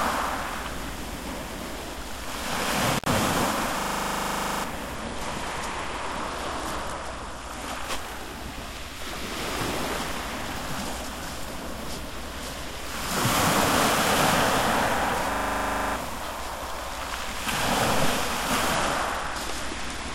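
At 2.95 s an intermittent contact opens the line for about 76 ms, until 3.09 s. The sound drops out between crackly edges, unlike a digital dropout, which would give clean, silent cuts.

From 3.80 to 4.64 s a system hang loop repeats one 40 ms slice 21 times, a rough 25 Hz buzz standing in for about a second of lost audio. The same fault returns from 15.32 to 15.96 s with 16 repeats, covering roughly 0.7 s. A skip would jump forward rather than cycle.

From 4.94 to 7.84 s, and again from 18.74 s to the end, a Bluetooth SBC bit pool drop dulls the treble and adds gritty quantisation noise. The bandwidth loss points to a fall from bit pool 31 to 14, near 99 kbps. Packet loss would cause gaps instead.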